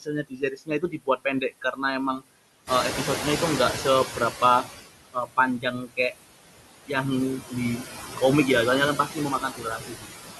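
Noise suppressor artifacts run through the whole clip. The suppressor pulls the steady background down by about 19 dB, estimating it band by band and frame by frame. As a result the noise floor drops away in the gaps and comes back up beneath the speech.

Speech cut by the noise suppressor first appears from 0.01 to 1.81 s. Here the suppressor treats parts of the speech as noise, and the drop reaches about 21 dB. Spread across the span, nearly three quarters of a second of speech is pulled down, and soft consonants and word endings sound swallowed.

The room noise steps up by about 12 dB at around 2.5 s, settling about 7 dB below the speech. From 2.66 to 4.67 s the noise suppressor is catching up: its noise estimate lags the new level, so at first the louder background comes through with less reduction. Over roughly 2 s the estimate adapts and the reduction settles at about 12 dB.

More speech cuts follow at 4.07 to 4.67 s (about 7 dB, brief), 5.13 to 6.14 s (about 19 dB, a few hundred milliseconds affected), 7.4 to 7.83 s (about 14 dB, brief) and 8.96 to 10.1 s (about 19 dB, well over half a second affected). 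In each, quiet parts of the speech go faint along with the background.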